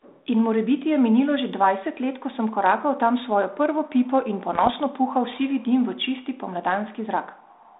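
From 4.53 to 4.70 s, between "svojo prvo pipo in" and "puhal sivi dim v", bit errors on the ADPCM link produce a cluster of pops and rough, gritty bursts, with the level briefly jumping and sagging. At an error rate of roughly half a percent, each flipped bit throws off the decoder's step size and predictor, so the damage rings on for milliseconds. The waveform shows spiky jumps and uneven envelope steps, and the spectrogram shows broadband vertical streaks within the 150 Hz to 3.7 kHz band of the 32 kbit/s G.726 line.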